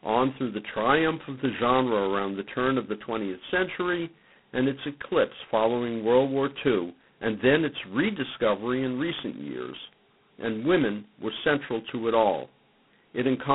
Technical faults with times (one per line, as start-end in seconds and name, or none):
0.00-13.55 G.726 ADPCM